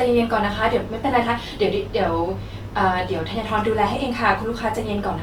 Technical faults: Opus compression

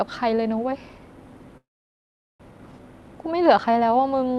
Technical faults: long network dropout; jitter buffer speed-up

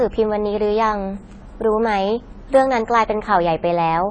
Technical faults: AAC compression

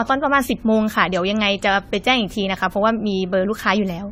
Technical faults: generation loss

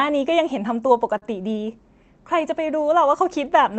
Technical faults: short stall from a late packet

